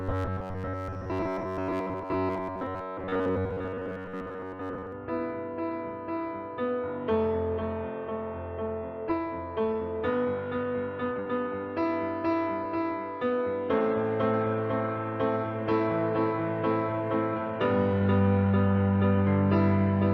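From the start to about 4.92 s the sound carries a rigid, metallic buzz at 93.8 Hz, the robotic sound from repeated short buffers. It is likely caused by audio arriving too seldom, so that playback loops a slice of roughly 10.7 ms (one over 93.8 Hz) for most of that stretch while the real audio is skipped. Unlike a codec's watery warble, the buzz holds one fixed pitch that the underlying sound only loosely follows. At 9.1 s comes a skip ahead: playback jumps forward with no gap at all, and around a second of audio is gone, with the two sides butted together. That seamless join separates it from a dropout, which would leave silence or a fade where the missing piece was. It also cuts the delay by about a second. Three jitter buffer speed-ups follow: 9.19 to 13.38 s at 109% speed, removing around 0.4 s; 15.43 to 16.34 s at 106%; and 17.93 to 18.74 s at 110%. In each, short pieces one or a few pitch periods long are cut out repeatedly, so the audio sounds hurried while its pitch stays put. 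A simple faster playback would raise the pitch as well.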